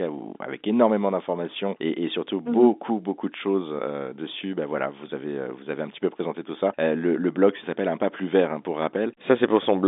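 No technical faults are audible in this speech.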